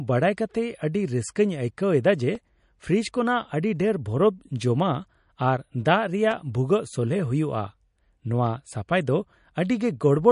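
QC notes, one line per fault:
Throughout: MP3 compression, likely from a low-bitrate encode, something around 40 kbps. Nothing comes through above 10.6 kHz, so the top end is dull, and the weak detail flickers between frames, giving the speech that plainly audible watery, swirly edge on the s sounds.
2.35 s, 6.31 s and 8.47 s: block of digital silence. Each time the samples drop to zero for a couple of milliseconds or less, then snap straight back with no fade, so you hear a quick tick rather than a gap. That's most likely the output buffer not getting filled in time.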